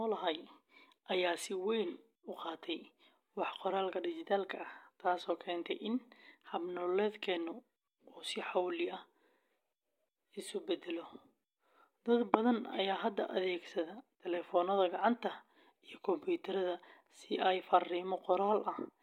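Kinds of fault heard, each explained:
No technical faults can be heard in this speech recording, and the signal holds steady throughout.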